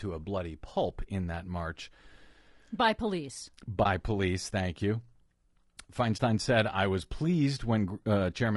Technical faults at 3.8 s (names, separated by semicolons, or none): low-delay AAC compression; AAC frame loss with muting